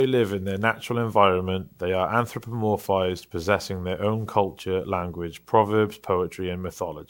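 Generation loss runs throughout the speech: a swirling, hollow smear with softened consonant attacks, likely from around seven rounds of MP3 encoding near 128 kbit/s, each compounding quantisation noise.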